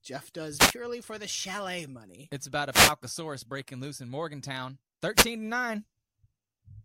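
Short bursts of swishing static break through the speech at 0.56 to 0.74 s, 2.71 to 2.94 s and 5.14 to 5.27 s. Each is a wireless microphone noise hit: reflected radio paths cancel, the FM signal fades, and receiver noise rises over the voice.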